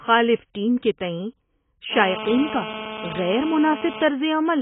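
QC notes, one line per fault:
Throughout: AAC compression, likely the cause of the heavily dulled, smeared speech with nothing above 3.8 kHz, which points to a low bitrate around 16 kbps. Unlike a plain low-pass filter, the coarse quantisation leaves warbling, fizzy texture within the remaining band.
1.93 to 4.04 s: GSM phone buzz, a hard, raspy buzz at 217 Hz with many harmonics, about 9 dB below the speech and nearly steady, as during a call. Its 217 Hz pulse rate and gritty edge distinguish it from smoother 50 or 60 Hz mains hum.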